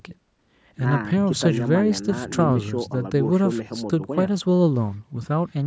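Nothing here stands out as a fault: the speech has simply passed through a call's microphone processing, which trims away the lowest bass, and that's just how such a path is meant to sound.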